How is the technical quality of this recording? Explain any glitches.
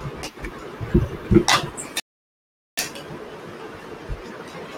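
The recording has one clear glitch, a rebuffering stall. At 2.00 s the speech cuts to silence and resumes at 2.78 s, continuing exactly where it stopped. Playback ran out of downloaded audio and waited for more, inserting about 0.78 s of dead air without losing any of the speech.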